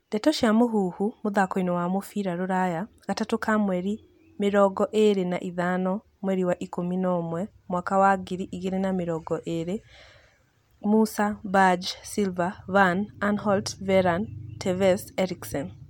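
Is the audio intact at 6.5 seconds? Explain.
Yes, the speech at 6.5 seconds is intact, with no dropout, click, distortion or other fault audible at that moment.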